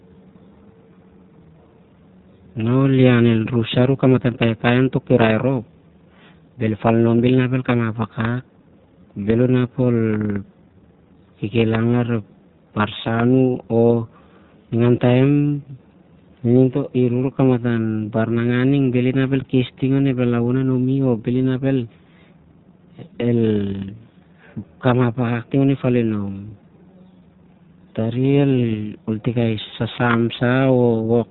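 The speech is confined to a narrow telephone band, with nothing audible above 4 kHz, and carries a rough, slightly synthetic grain from start to finish that is plainly audible rather than subtle. This is the sound of the iLBC codec, which codes the excitation of each short frame on its own without drawing on the previous one; the texture fits its 20 ms frame mode at around 15.2 kbps.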